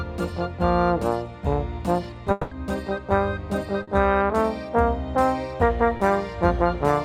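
A long network dropout runs from 2.31 to 2.53 s. The sound is stretched into a fading buzz or hiss for about 200 ms and never drops to silence. It then resumes further on with that stretch gone, likely because a run of packets failed to arrive.

Short concealed packet loss follows at 3.83 to 3.89 s and again at 5.97 to 6.01 s. Each time, a few hundredths of a second went missing and the receiver patched the gap by extending the preceding sound, leaving a brief smear or wobble before real audio returns.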